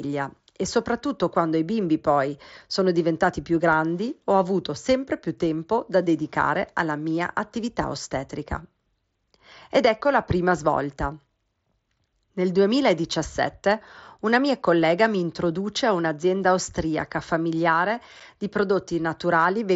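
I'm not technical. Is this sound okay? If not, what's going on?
No. There is unconcealed Bluetooth headset packet loss at 18.20 s, just after "a un'azienda austriaca familiare". One tiny chunk of speech sent between headset and phone went missing, leaving a sharp-edged 7.5 ms hole that can sound like a click.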